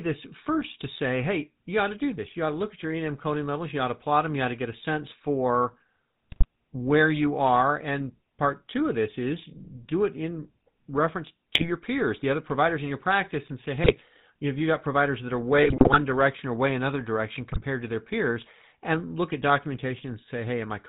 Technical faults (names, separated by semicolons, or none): GSM full-rate codec; GSM bit errors